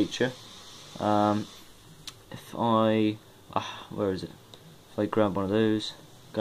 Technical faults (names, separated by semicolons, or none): none